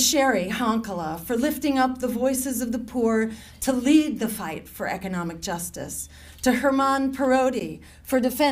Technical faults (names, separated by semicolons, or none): Bluetooth stall